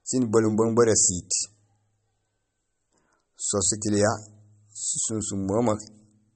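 A low-bitrate encode, likely MP3 compression at a setting that fits roughly 32 kbps, runs through the whole clip. Starved of bits, the encoder has discarded all content above 8.4 kHz, so the speech sounds dull and boxed-in, with s sounds losing their crispness. Weak frequency components flicker on and off between frames, leaving a plainly audible watery, swirling texture over the speech, and consonant onsets come across smeared rather than sharp.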